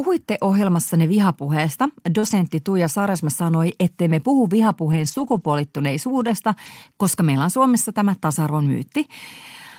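At 0.87 s there's a lost packet rebuilt from error correction: one 20 ms stretch plays from the lower-bitrate backup copy carried in the next packet, so instead of a gap you hear a brief rough, noisier patch. Around 2.19 to 2.25 s comes a short concealed packet loss. About 40 ms of speech didn't arrive in time, and the decoder stretched the preceding sound to cover it before blending back in, which gives a quick smear or wobble. Overlapping that, from 2.23 to 2.33 s, about 60 ms is again rebuilt from error correction and sounds grainy. The longest rebuilt stretch runs from 4.92 to 5.46 s, right after "sanoi ettei me puhu". That's 280 ms of the coarser backup, which fits fourteen separate 20 ms packets, so it reads as a rough, noisy passage. One last 20 ms rebuild at 6.66 to 6.68 s, just before "koska meillä on", adds a tiny rough blip.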